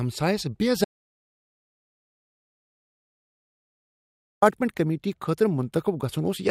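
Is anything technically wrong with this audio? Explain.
Yes. From 0.85 s to 4.42 s there is an audio dropout to silence. The speech cuts off mid-flow and returns abruptly. About 3.6 s is silence, with no room tone. The input was likely lost while recording continued, writing silence.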